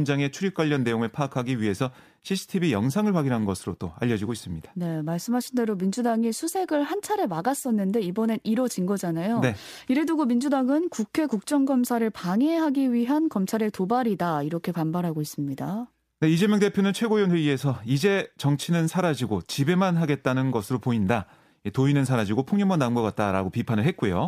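No technical faults are audible.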